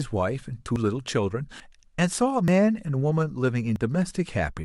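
A speech clip with four sudden skips. Each one is a jump in the sound with no gap of silence. They fall at 0.76, 1.6, 2.48 and 3.76 s. Three skip about 40 ms. The one at 1.6 s skips about a tenth of a second. The likely cause is a dropped buffer (overrun), where samples were overwritten before being read and the two sides joined directly.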